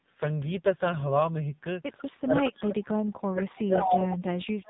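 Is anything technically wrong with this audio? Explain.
Yes, three problems can be heard in this speech.

Throughout, the AMR narrowband mobile codec is running at a low rate, 5.9 kbps, and the damage is heavy. The codec rebuilds the voice from a vocal-tract model fed by sparse pulses, so at this bit budget it comes out buzzy and synthetic. Nothing above 3.8 kHz survives. That hard ceiling and the rasp separate it from plain low-pass filtering, which would dull the sound without making it artificial.

There is an echo leak in four places: 1.97 to 2.05 s, 2.48 to 2.54 s, 3.79 to 3.97 s, and 4.65 s to the end at 4.70 s. Each time, a copy of the voice returns 148 ms late. It is about 25 dB down in the first, about 15 dB down in the second, about 20 dB down in the last, and roughly as loud as the speech itself at 3.79 s. The likely cause is a far-end loudspeaker whose echo canceller let residue back into its microphone. 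The fixed 148 ms gap distinguishes this from room reverberation, which would be a smooth, continuous tail.

From 2.23 to 4.58 s the speech is suppressed in double talk. About two seconds in total dip, and the deepest drop is around 40 dB, so parts of the voice fall away or thin out. The likely cause is an echo canceller that treated both sides talking at once as echo and ducked everything. Unlike network dropouts, which leave clean gaps, these are level dips applied by the echo canceller.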